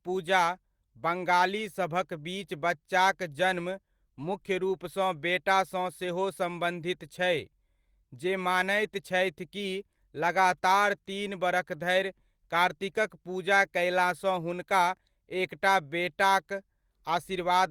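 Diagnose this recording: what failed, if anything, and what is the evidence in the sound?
Nothing failed; no faults are audible anywhere here.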